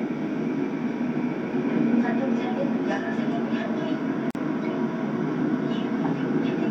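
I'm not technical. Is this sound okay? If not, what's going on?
No. The audio was prepared in separate pieces that were then stuck back together without trimming the edges, which leaves a gap at a join of encoded pieces. Each piece carries a sliver of added silence at its start and padding at its end. At 4.31 seconds the sound suddenly drops out for about 44 milliseconds, a brief hole with blurred edges, and then picks up exactly where it left off at 4.35 seconds.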